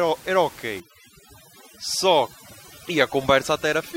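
A short speech clip where, from 0.8 s to the end, overdone noise removal kicks in: the room noise, about 20 dB under the voice, drops and breaks up into twinkly specks, and the voice's quieter bands get gated out too.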